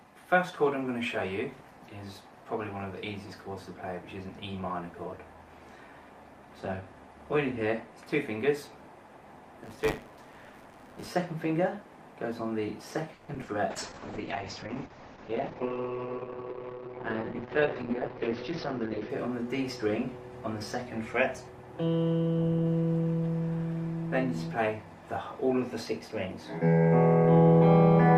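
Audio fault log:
9.63–11.10 s, buffer tearing: a steady buzz at 100 Hz runs through the sound for about a second and a half, and it is present only while signal is present. The writer filling the ring buffer and the hardware reading it have drifted into each other, so every period carries a small slice, roughly a tenth, of audio from about 40 ms earlier, with hard joins on both sides. The fixed rate and constant rattle set it apart from packet-loss chop.
13.13–13.50 s, repeated packet loss (robotic sound): five holes fall in quick succession within under half a second, the longest about 150 ms. About half the span is patched by stretching the last sound forward, roughly 190 ms of fill, and about 100 ms is simply missing. The result is choppy, with pieces gone. Unlike buffer tearing, the breaks are irregular and short-lived rather than a steady periodic buzz.
13.71–19.16 s, call bitrate drop: for about five and a half seconds the sound turns rough and muffled. 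The encoder was pushed from 32 kbps down to 7 kbps, so it codes far more coarsely and the audio band shrinks from 20 kHz to about 6 kHz, taking away the top end. This is a lasting change in tone and texture, not a change in timing, which sets it apart from the jitter-buffer events inside it.
13.83–14.13 s, jitter buffer slow-down: for about 0.3 s the audio drags to 83% speed while the pitch stays the same. The receiver was building up a reserve, repeating single pitch periods or bits of pauses many times in a row, adding about 58 ms in total. Sounds are drawn out. Because the pitch is held, it differs from a tape-style slowdown, and nothing is lost, unlike packet loss.
15.48–16.81 s, jitter buffer speed-up: for about 1.3 s the audio runs at 110% speed at unchanged pitch and sounds hurried. The buffer was holding more than its target, so the receiver removed short pieces of one or a few pitch periods again and again, roughly 150 ms in all. 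This is the reverse of the slow-down just before it, and the audio is compressed in time rather than broken up as in packet loss.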